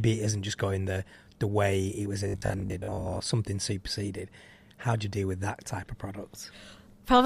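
Speech clip. From 2.28 to 3.28 s the voice becomes a rigid metallic buzz at 50 Hz, robotic sound likely from repeating 20 ms buffers that replace roughly half the audio.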